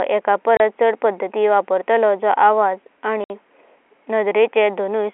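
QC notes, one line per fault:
0.57–0.60 s and 3.24–3.30 s, packet loss filled with silence: the telephone-band speech stops dead for 30 ms just before "चड पडदता", then for 60 ms, which fits one and two lost 30 ms packets. Exact multiples, true silence and hard edges separate this from concealed loss or fades.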